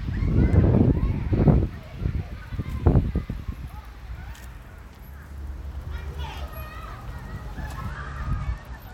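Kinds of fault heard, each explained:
Bluetooth SBC bit pool drop: From 7.89 s to the end, the link's encoder starves its upper sub-bands and quantises the rest coarsely, so the treble dulls and gritty noise rises. The sound points to the bit pool falling from about 28 to 12, near 96 kbps.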